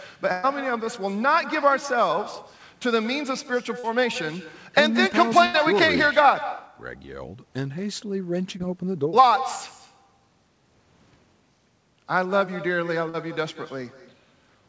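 Throughout the speech, every phrase is trailed about a fifth of a second later by a copy roughly 15 dB quieter and thinner. This is echo with no canceller: the far end's loudspeaker feeds its microphone and the loop returns the talker's own voice. Unlike room reverberation, it is a distinct delayed repeat rather than a smooth tail.

From 0.32 to 0.45 s, a burst of packet loss drops about 120 ms of audio. The receiver stretches the last sound into a held buzz or hiss that fades, then jumps ahead. A second burst at 5.45 to 5.56 s removes about 80 ms the same way. The audible held-and-fading tone and the lost stretch set these apart from the briefer smears.

Short concealed packet loss appears at 3.79 to 3.85 s, 8.58 to 8.61 s and 13.09 to 13.15 s, with 20 to 40 ms missing each time. The decoder fills each hole by continuing the last pitch or noise and then blending back. The result is a quick smear or wobble, which distinguishes it from the longer bursts. 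Across the clip, the call path leaves nothing above 8 kHz, which fits a wideband call codec such as G.722.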